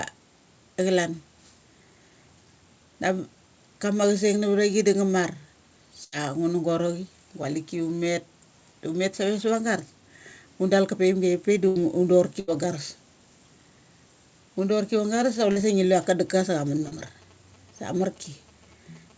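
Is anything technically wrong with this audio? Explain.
Yes. Three burst of packet loss events, at 6.04–6.15, 11.68–11.79 and 12.40–12.51 s, each lose about 80 ms. The receiver extends the last sound into a fading buzz or hiss, then resumes with audio missing.

Short concealed packet loss, at 15.52 and 16.88 s, is briefer at about 40 ms. It is a quick smear or wobble, not an audible held tail.

GSM signalling bursts run from 16.28 s to the end. A nearby 2G phone's radio bursts are rectified into a faint, galloping dit-dit-dit of short 217 Hz buzzes, independent of the speech.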